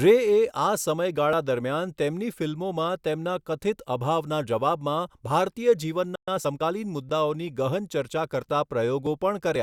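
At 6.15 s the player likely ran short of data or had its thread blocked, so this playback stall drops the speech into silence for about 120 ms, resuming at 6.28 s. From 6.28 to 6.76 s a time-compressed catch-up cuts and cross-fades small slices to clear the backlog, so speech runs about 1.25 times fast at normal pitch.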